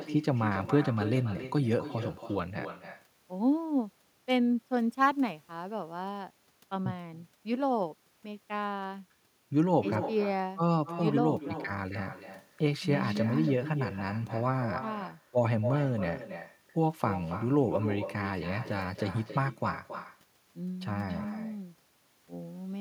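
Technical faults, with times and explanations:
Throughout: echo with no canceller. The far end's loudspeaker feeds its microphone and nothing cancels it, so the speech returns roughly a third of a second later, about 11 dB quieter and thinner. On a spectrogram, each syllable's pattern repeats faintly after that lag. The waveform shows fainter trailing copies of every burst.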